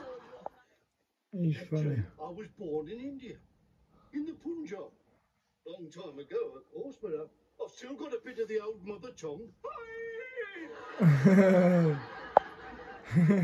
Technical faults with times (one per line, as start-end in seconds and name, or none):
0.13-13.43 clock slip clicks